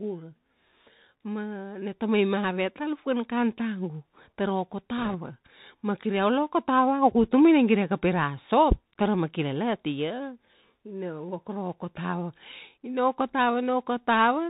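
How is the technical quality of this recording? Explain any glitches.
Technical quality is limited by a narrowband Bluetooth headset path throughout, with one short burst of link damage.

Throughout, the Bluetooth CVSD headset codec caps bandwidth at 4 kHz. Its one-bit adaptive steps lag on loud, bright sounds, giving scratchy sibilants and granular hiss, consistent with 64 kbps CVSD.

From 4.98 to 5.17 s, bit errors on a Bluetooth voice link add a rushing crackle. The error rate is around one or two percent, and because no bit outweighs the others and errors die away fast, there are no sharp clicks.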